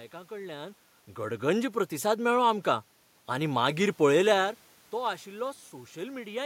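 Automatic gain rising runs from 1.15 to 4.05 s. The gain control judged the input too quiet and lifted its gain by about 4 dB, so the speech and the room noise swell together. The level shifts near half a second and near 4 s are the talker moving.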